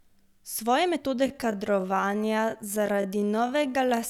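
From 1.1 s to the end, a time-stretched section slows the speech to about 0.58× speed at unchanged pitch, so it drags, likely from pitch-preserving stretching.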